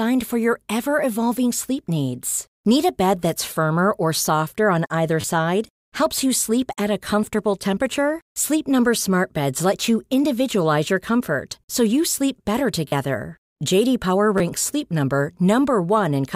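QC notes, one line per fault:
5.21–5.24 s, repeated buffer: fresh audio failed to reach the device in time, so it replayed the last short block, which fits a 10 ms buffer, three extra times, dropping roughly 30 ms of sound. The hard joins at each repeat give a brief buzzy stutter.
12.88–12.92 s, repeated buffer: the same underrun, with four extra plays, losing about 40 ms and producing a slightly longer buzz.
14.38–14.40 s, repeated buffer: two extra plays, about 20 ms lost, heard as a quick click-like stutter.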